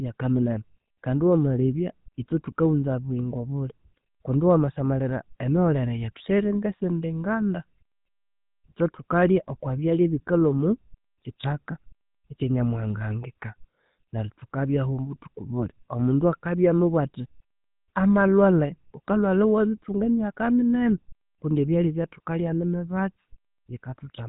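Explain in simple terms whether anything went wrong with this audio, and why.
Throughout, the speech carries plainly audible GSM full-rate codec damage: the voice is rebuilt from coarse pulses, sounding buzzy and gravelly, with nothing above 3.8 kHz.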